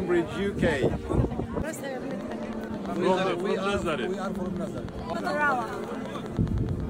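From 2.11 s to 6.81 s a train of clicks runs at a steady 9.4 per second, around fifty in all, peaking a few dB above the sound and ticking through pauses too, likely from nearby interference. Their even spacing and matching shape set them apart from random crackle.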